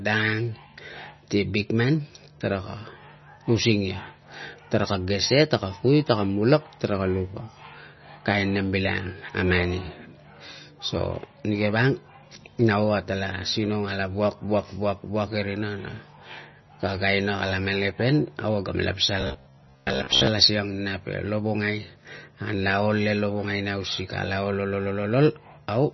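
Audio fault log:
Throughout: MP3 compression. Nothing is present above 5.9 kHz, and the speech has a heavily watery, swirling texture with smeared onsets and chirpy sibilants. This likely comes from a starved MP3 encoder, consistent with a bitrate near 25 kbps, cutting treble and dropping weak spectral lines frame to frame.
19.21–20.27 s: robotic sound from repeated short buffers. A rigid metallic buzz at 66.7 Hz runs through the speech, with roughly 70% of this stretch repeated. Repeating the same 15 ms chunk while fresh audio is skipped is the likely mechanism, and it imposes that fixed pitch.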